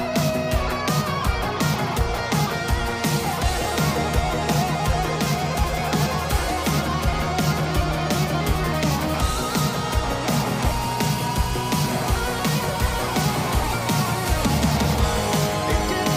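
Nothing stood out on listening; no fault could be heard anywhere in the audio.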